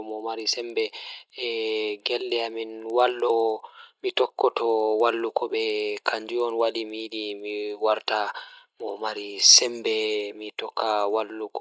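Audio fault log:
throughout, resampler restarted on every block: faint ticks at 10 per second, only under speech, because each 100 ms block was converted separately (fits 24 kHz to 16 kHz) without its true neighbours. The spectrogram shows thin vertical lines every 100 ms, and the waveform small discontinuities at block edges.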